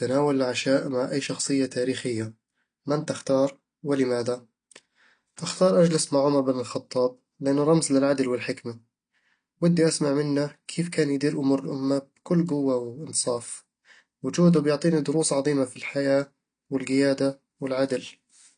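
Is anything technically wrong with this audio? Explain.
Yes. Throughout the speech, AAC compression damage is plainly audible. Nothing sounds above about 9.8 kHz, so the top is dull. Sibilants fizz and vowels warble. Coarse quantisation of the spectrum at a low rate, likely around 32 kbps, leaves gaps and smearing.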